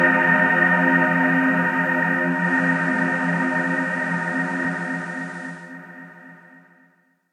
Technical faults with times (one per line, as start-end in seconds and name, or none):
2.17-5.82 digital radio blending to analogue